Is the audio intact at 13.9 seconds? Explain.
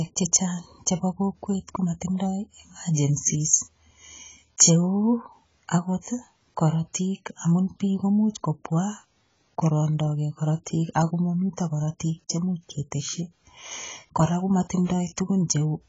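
No. At 13.9 seconds, as across the whole clip, the speech sounds dull and smeared, with nothing above 7.6 kHz and a watery, warbling texture on sustained sounds and sibilants. The likely cause is heavy AAC compression, which fits AAC-LC at a very low bitrate of about 16 kbps. With so few bits available, the encoder drops the upper band entirely and quantises the remaining spectrum so coarsely that detail smears from frame to frame.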